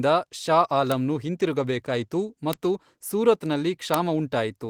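At 0.92 s a bit error spike cuts through the speech as one sharp tick. It comes back at 2.53 s and again at 3.94 s. Each time a single sample has one flipped bit. Its value jumps by a power of two and falls straight back. That gives a one-sample click with energy across the whole spectrum. It has nothing to do with the speech. The Opus voice compression underneath adds only light coding texture, with content reaching about 20.2 kHz.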